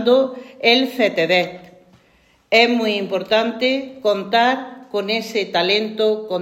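Nothing stood out as a technical fault on listening to the audio.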